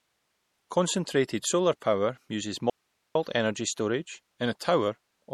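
A speech recording carries plainly audible MP3 compression throughout, likely from a low bitrate around 48 kbps: nothing remains above 14.1 kHz, and the sparse spectrum sounds watery. Pre-echo appears at 1.80–1.82 s and again at 4.59 s, where quantisation noise from a transform block leaks ahead of sharp onsets as brief hiss. Between 2.70 and 3.15 s the signal cuts abruptly to a faint residue of hiss far below normal level for about 450 ms, likely a dropout on a path that stayed live.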